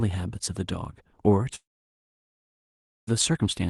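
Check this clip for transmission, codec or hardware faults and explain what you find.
One transmission fault is audible: a long network dropout in the middle of the speech.

From 1.55 s to 3.09 s the speech stops. The tail of the last sound is stretched into a short fading buzz, then roughly 1.5 s of near silence follows before speech resumes with that stretch simply missing. The likely cause is a run of lost packets that the receiver's concealment could only briefly cover. On a waveform this looks like a flat gap. A spectrogram shows a brief smeared band decaying to an empty region, with energy topping out near 12 kHz on both sides, as expected from the call codec.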